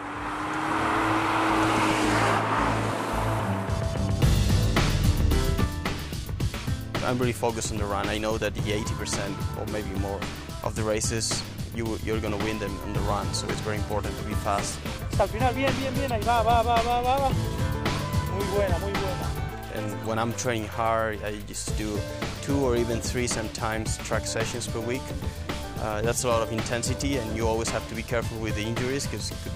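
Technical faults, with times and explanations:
5.64 s to the end, sudden gain jump: sound and background drop together by about 4 dB in an instant, likely a gain change applied without any ramp.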